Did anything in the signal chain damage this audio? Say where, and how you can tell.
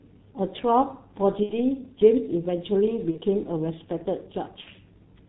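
Yes. The whole clip sounds muffled and hoarse, with nothing above 4 kHz and consonants smeared into one another. Breathy, rough vowels show a voice model that lags behind the speech. This is codec damage, and the character fits the G.723.1 codec running near its 6.3 kbit/s rate. Its 30 ms frames and coarse parameter updates cannot follow fast changes, and the band limit removes all the upper detail that makes consonants crisp.

There are three brief glitches, at 1.43–1.55 s, 3.11–3.19 s and 4.61–4.70 s. At each one the speech stretches into a buzzy tone or coloured noise that fades, and the level stays weak for a moment after normal sound resumes. This is VoIP packet loss concealed by the speech codec, a network fault. The first and last gaps fit two lost 30 ms frames (about 60 ms), and the middle one fits a single frame. The decoder filled each gap by repeating its last pitch and filter at falling gain, and its frame-to-frame memory slowed the recovery.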